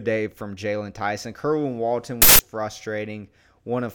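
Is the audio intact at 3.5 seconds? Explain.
Yes, at 3.5 seconds the speech runs intact, with no dropout, click, distortion or other fault audible at that moment.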